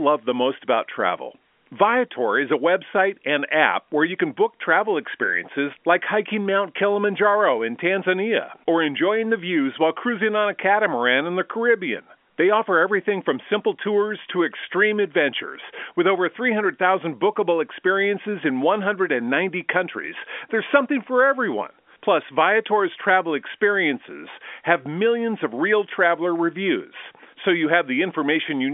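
Speech over a telephone line, with no technical faults heard.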